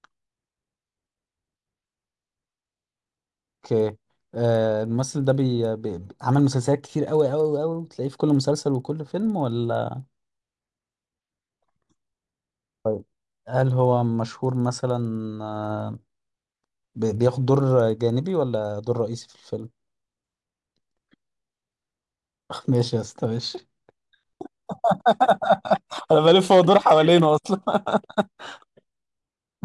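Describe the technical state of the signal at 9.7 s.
At 9.7 s the speech carries a resampler restarted on every block, present throughout the clip. Each 50 ms block is converted in isolation, likely a 48 kHz to 24 kHz step, so every block edge gets a small error, heard as a 20 Hz tick-buzz under the speech.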